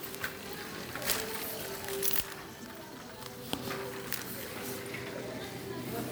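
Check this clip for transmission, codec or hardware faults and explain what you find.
One codec fault runs through the whole clip.

Generation loss, present throughout: the sound has likely been through about three rounds of lossy WMA-style encoding, consistent with 128 kbit/s, each pass re-quantising on a shifted frame grid. The errors pile up into a swirly, hollow smear with softened attacks, and nothing remains above 20.1 kHz.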